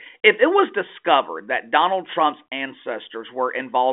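Nothing stood out on listening to this speech, which comes through the narrow telephone band of a 40 kbit/s G.726 ADPCM line.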